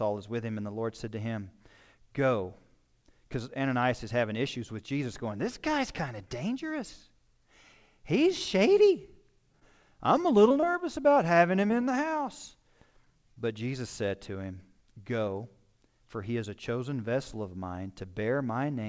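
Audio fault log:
9.60–9.63 s, 11.67–11.71 s and 13.34–13.38 s: short concealed packet loss. About 20 ms of audio arrived too late, and the receiver bridged each hole by extending the preceding sound, leaving a brief smear or wobble.
10.21–11.28 s: repeated packet loss (robotic sound). Six separate gaps, the longest 21 ms, were each patched by continuing the last sound. This makes the stretch choppy, with pieces missing.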